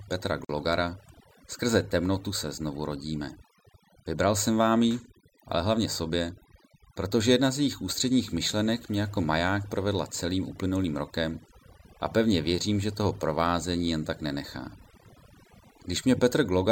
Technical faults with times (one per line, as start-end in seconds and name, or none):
0.00-16.71 overdone noise removal
0.45-0.49 gap at a join of encoded pieces